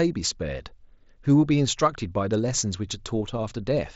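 No technical faults occur anywhere in the speech recording.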